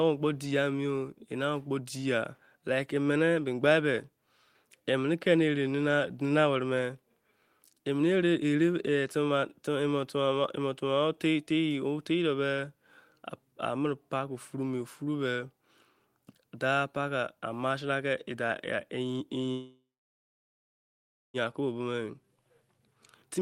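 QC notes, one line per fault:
19.51–21.37 s, call audio freeze: the sound stalls and the last moment is stretched into a fading buzz that drops to silence for roughly 1.5 s of the 1.83 s hold. Playback then resumes where it stopped, so nothing is lost, only delayed, likely from packets held up in transit draining the jitter buffer.
21.61–23.41 s, jitter buffer speed-up: playback runs at about 116% speed with unchanged pitch, sounding hurried through to the end. The receiver is trimming short pitch-period pieces repeatedly, around 0.3 s in total, to shed the extra delay the freeze added.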